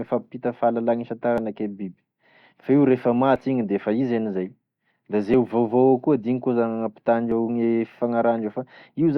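At 1.38, 3.36, 5.34 and 7.32 s the speech jumps forward by about 20 ms, spliced straight across with no gap. That's audio missing between chunks, with regular skips about every 2 s, most likely from a recorder dropping a sliver each time it closes one chunk and opens the next.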